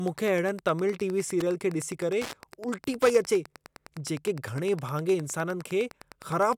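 Throughout the speech there is Wi-Fi interference: a nearby Wi-Fi radio's beacon, sent every 102.4 ms, is being picked up and rectified by the audio circuitry. It sounds like a steady ticking just under ten times a second, sitting roughly 20 dB below the speech.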